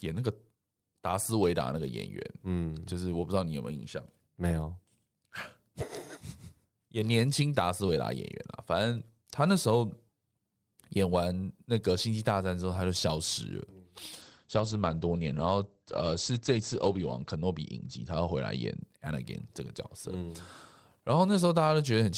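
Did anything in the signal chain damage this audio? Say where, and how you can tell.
Yes, a call bitrate drop at the codec stage, from 14.22 to 18.87 s. The speech turns coarse and muffled as the top end is cut from 20 kHz to 8 kHz for about 3 s, which fits the encoder falling from 32 to roughly 14 kbps before recovering.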